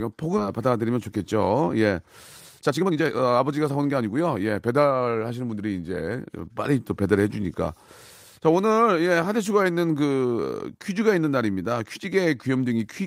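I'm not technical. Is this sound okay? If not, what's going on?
No. At about 0.37 to 0.39 s there is a skip ahead. The speech jumps forward with no gap. About a second and a half of speech is simply missing. The audio was dropped while later audio was already waiting, so the two sides join directly.

Right after, there are two stretches of jitter buffer speed-up. The receiver had built up too much waiting audio. It trimmed tiny slices many times over to catch up. The voice keeps its pitch but sounds rushed.

From 0.47 to 2.07 s the speech plays about 11% fast, losing roughly a fifth of a second. From 2.59 to 5.60 s it runs about 23% fast. That is more noticeably hurried, and well over half a second is cut.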